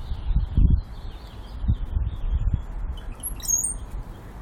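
At 0.38 to 0.40 s there is a short burst of damaged data in a compressed stream. Part of the encoded data was lost or corrupted. The decoder misreads that frame and loses sync while it hunts for the next header. The result is a brief chirp, click or short hole.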